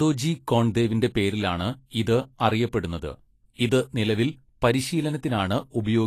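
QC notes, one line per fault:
Throughout: Vorbis compression. The speech has nothing above 14.2 kHz, and the treble beneath is plainly grainy and hissy, with onsets smeared. This likely comes from a coarse Vorbis encode near 34 kbps, which turns fine detail into noise. A spectrogram shows a hard ceiling and speckled upper bands.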